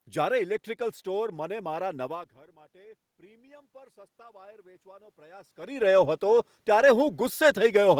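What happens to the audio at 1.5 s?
At 1.5 s the automatic gain control is rising. The input level had dropped by about 23 dB, so the control began slowly adding gain, about 9 dB in total, from 1.32 s to 7.06 s. Because the boost applies to everything the microphone picks up, the speech and the room noise behind it swell together over several seconds, so the background climbs along with the voice. The talker moving around 2 s also shifts the level heard.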